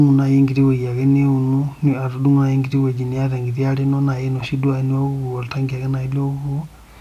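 No technical faults are audible.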